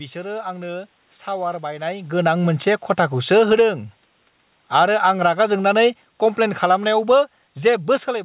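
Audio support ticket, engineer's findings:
Automatic gain falling at 3.16 to 3.7 s (about 8 dB down), 4.6 to 4.99 s (about 7 dB down), and from 5.66 s to the end. The AGC reads the input as too hot and winds its gain back, so speech and room noise sink together. On the waveform, the envelope tapers over each span. On the spectrogram, the noise floor darkens in step with the speech, which a talker moving wouldn't do.

Automatic gain rising at 3.6 to 4.05 s (about 6 dB up) and 4.92 to 5.74 s (about 4 dB up), each overlapping the tail of the preceding drop. The same AGC swings the other way after judging the level too low, and the voice and background swell as one. The waveform shows the envelope climbing back. On the spectrogram the background noise band brightens alongside the speech, all below the hard 4 kHz ceiling that fits a narrowband G.711 call path. The level moves near 1.5 s and 8.0 s come from the talker, not the AGC.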